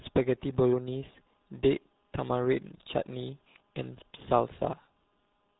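Speech coded with the RealAudio 14.4 codec throughout, sounding muffled and gargly from heavy codec damage that points to an 8 kbit/s dial-up-era bitrate. A spectrogram shows a hard ceiling at 3.8 kHz with smeared, blotchy harmonics below it.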